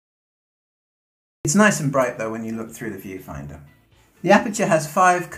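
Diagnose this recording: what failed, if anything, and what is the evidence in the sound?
The clip opens with digital silence until 1.45 s, then the sound jumps in mid-event with no attack or fade-in. This is a cut-off start at the capture or buffer stage: recording began late and the opening was silent before real audio arrived.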